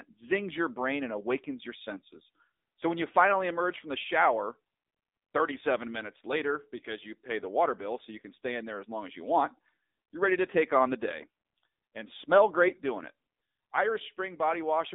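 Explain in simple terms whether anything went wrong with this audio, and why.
Yes, the speech has passed through the AMR narrowband mobile codec, the low-rate voice compression used on older mobile calls, and it affects the whole clip from start to finish. Nothing above about 3.7 kHz survives, and little below 250 Hz. What separates this from a simple telephone-style filter is the plainly audible damage: the codec rebuilds the voice from a rough model of the throat and mouth, so it sounds buzzy and synthetic, not just muffled.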